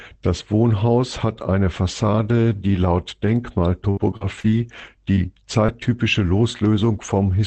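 At 2.15 to 2.25 s, 2.52 to 2.54 s, 2.98 to 3.00 s and 3.26 to 3.28 s, a lost packet rebuilt from error correction leaves no gap, but each 20 ms stretch turns briefly rougher and noisier. Each lost packet was replaced by the lower-quality redundant copy carried in the next one. This happens within an Opus call path whose top end stops near 8 kHz.

From 3.90 to 5.70 s, repeated packet loss gives a choppy, robotic sound. Six separate gaps, the longest 66 ms, are patched by extending the preceding sound. About 180 ms is concealed this way, roughly a tenth of that span.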